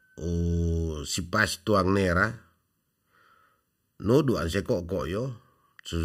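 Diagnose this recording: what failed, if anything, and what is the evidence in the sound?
What failed is channel delay (comb filtering), probably at the driver or buffer stage. The speech sounds hollow and phasey for the whole clip. One channel lags by just under a millisecond, so the mono sum cancels at evenly spaced notches starting around 700 Hz.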